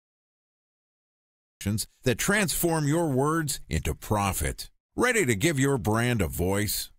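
For the first 1.61 s there is only digital silence, and at 1.61 s the speech arrives already under way, landing directly on "that transform your words" with no attack or fade. This is a cut-off start: capture began late, so the beginning of the utterance was never recorded. Unlike a slow fade-in or a quiet room lead-in, the silence is dead rather than low-level, and the sound switches on mid-phrase at full level instead of building up.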